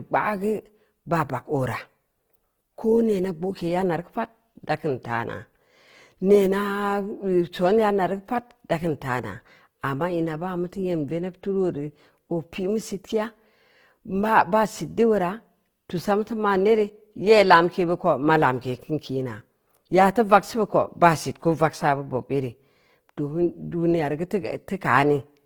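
Throughout, the speech carries plainly audible Opus compression damage: voiced sounds turn grainy and rough, with noise replacing fine tonal detail, while the band stays full to about 20.2 kHz. The likely cause is a music-mode (CELT) encode near 16 kbps, filling starved bands with noise.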